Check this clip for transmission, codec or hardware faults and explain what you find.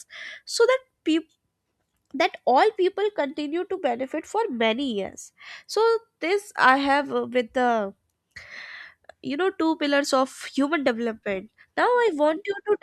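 No faults can be heard anywhere in this recording.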